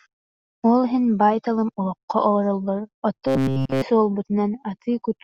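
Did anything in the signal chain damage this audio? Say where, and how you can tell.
Yes. From 3.27 to 3.82 s the speech collapses into a rigid, metallic buzz at 133 Hz that only loosely tracks the talker: robotic sound from repeated short buffers. The stage is likely the driver or buffer level. Fresh audio stopped arriving in time, so essentially the whole stretch was filled by looping one short block while the real signal was skipped. A 133 Hz buzz implies a repeat period of about 7.5 ms, which is the length of the looped block.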